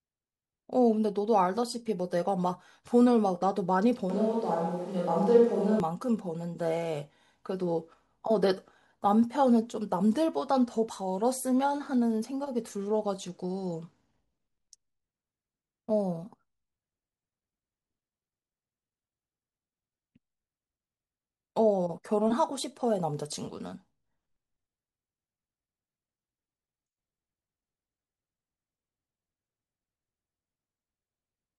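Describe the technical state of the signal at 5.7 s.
A switch to a distant microphone runs from 4.10 to 5.80 s, so 5.7 s falls inside it. The speech turns suddenly roomy and hollow, with thinner bass, at roughly the same level, and background noise sits around 35 dB below it. Likely the close microphone dropped out, leaving a farther pickup.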